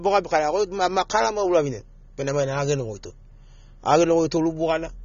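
Speech throughout shows AAC compression damage: the sound is dull and smeared, with a fizzy, warbling edge on sibilants, likely from low-bitrate AAC-LC coding around 24 kbps. A spectrogram shows a hard ceiling near 6.9 kHz.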